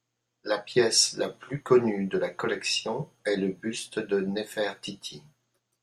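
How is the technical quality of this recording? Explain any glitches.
Nothing here needs explaining: the speech comes across without any glitch to point to.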